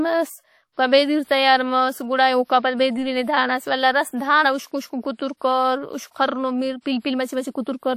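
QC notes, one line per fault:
throughout, WMA compression: the speech has likely passed through a Windows Media Audio encoder at a low bitrate, with the damage consistent with roughly 48 kbps. Its long transform blocks smear quantisation noise over tens of milliseconds around each syllable, and weak spectral lines get zeroed. The result is plainly audible: a ringing, washy texture with hiss that swells and fades with the speech, and nothing at all above 18.4 kHz.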